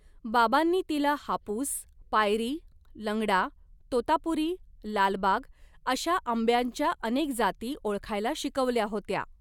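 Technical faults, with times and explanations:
No technical faults can be heard in this speech clip.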